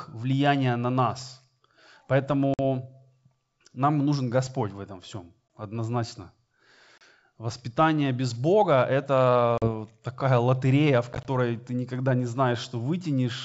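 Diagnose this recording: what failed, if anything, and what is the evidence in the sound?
Network: packet loss on an ADPCM call. Hard silent holes at 2.54, 5.48 (after "в этом всем"), 6.98, 9.58 and 11.13 s, the last scattered across 120 ms before "ты никогда не". Speech returns slightly distorted while the decoder's predictor catches up.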